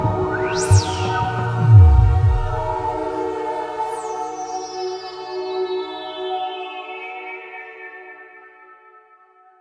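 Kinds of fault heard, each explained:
Listening to the music, nothing stood out as a technical fault.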